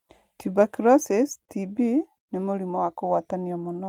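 No audible technical faults.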